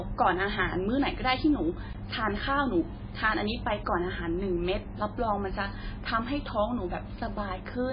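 From start to end the speech is cut off with nothing above 5 kHz and has a heavy watery, swirling texture, with s sounds chirping and attacks smeared. That is likely MP3 compression at a very low bitrate, around 16 kbps. A plain low-pass filter would dull the sound without the warbling.

At 1.93 s and again at 3.07 s, blocks of digital silence drop the sound to silence, about 16 ms and 5 ms long. The first comes across as a short hole and the second as a tick, rather than faded dropouts, because there is no ramp at either edge. The shorter one fits a 256-sample buffer not being filled in time.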